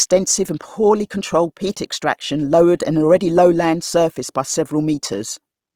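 Opus compression, throughout: starved bands get refilled with folded or noise content, likely from a rate near 24 kbps, leaving the speech plainly grainy and rough.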